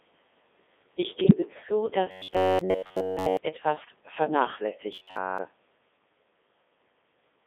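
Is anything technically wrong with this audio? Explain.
Yes. The speech runs through a Codec 2 vocoder at 3.2 kbit/s, band-limited to 250 Hz–3.6 kHz. The decoder rebuilds the voice from pitch, voicing and envelope parameters, leaving it heavily robotic and buzzy.

Bit errors on digital voice radio appear at 1.24–1.34 s and 3.84–3.96 s. Flipped bits, at roughly 5% and 3%, corrupt whole frames' parameters, producing brief bleeps and pitch or level jumps.

Robotic sound from repeated short buffers appears at 2.11–3.37 s and 4.93–5.38 s. There is a rigid metallic buzz at 93.8 Hz, which fits a repeated buffer of about 10.7 ms and is likely caused by late-arriving audio. Most of the first span is repetition, and the second is entirely repetition.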